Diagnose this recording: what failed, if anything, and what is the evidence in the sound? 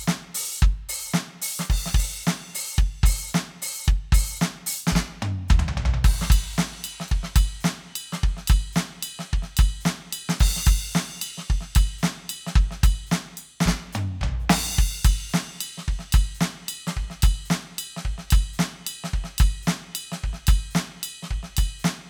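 Nothing in this music recording points to a failure at any stage of the chain. The music runs without any event that would mark trouble in the wiring, conversion, buffering, coding, network, storage or playback.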